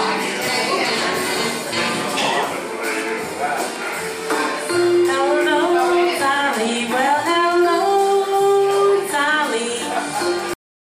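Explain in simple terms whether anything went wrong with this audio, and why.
Right at the end there's a cut-off end: at 10.54 s the sound just stops mid-sound and drops straight to dead silence, because the last chunk never got written.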